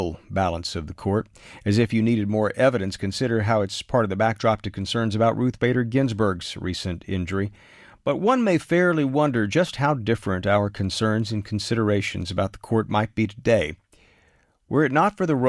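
Nothing technically wrong turns up anywhere in this bit of speech, so there are no times or causes to point to.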